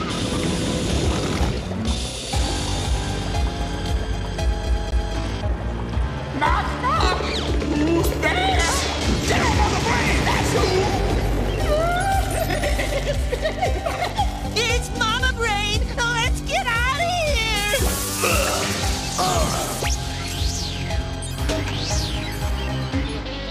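CD stuck on one turn at 4.67 to 5.14 s: the laser jumps back a track, so a 0.24 s piece of audio plays twice, with a brief mute at each jump.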